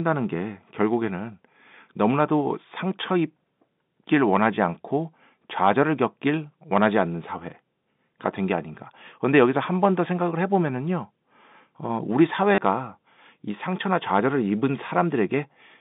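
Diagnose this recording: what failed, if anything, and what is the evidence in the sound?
Packet loss with the last packet repeated hits at 12.55 to 12.58 s. This is a network-stage fault, heard as a brief robotic stutter in the speech. About 30 ms of audio went missing, which fits three 10 ms packets. The receiver filled the gap by replaying the last packet it had. Those repeats seldom line up with the pitch of the speech. Across the 30 ms they form a short buzz at the packet rate, about 100 Hz. The G.711 telephone band around it, roughly 150 Hz to 3.7 kHz, stays intact.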